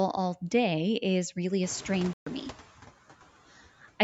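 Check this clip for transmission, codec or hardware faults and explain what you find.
Three faults are audible. Two come from noise suppression, and one is a brief dropout.

Noise suppressor artifacts run through the whole clip. The suppressor cuts bands it judges to be steady noise, by about 11 dB, frame by frame. The background dips between phrases and swells under them.

The noise suppressor catching up appears from 1.63 to 2.63 s, just after "is really". The room noise jumps by about 20 dB at around 1.5 s, and the suppressor's noise estimate lags. The noise first passes with less reduction, about 9 dB, then sinks over one second as the estimate adapts.

From 2.13 to 2.27 s the sound drops out for about 131 ms. The edges are abrupt or fade over a few milliseconds, and the audio resumes further along, as if it kept playing. The likely cause is a Bluetooth dropout. Audio packets reached the headphones too late and were discarded, leaving silence until good packets arrived.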